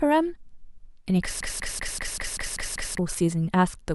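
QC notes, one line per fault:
1.41–2.98 s: broken-record loop. A 0.19 s fragment of the speech repeats exactly, back to back, eight times, so the sound stutters mechanically and the speech that belonged in that span is lost. Likely a stalled player or stream resending its last held buffer.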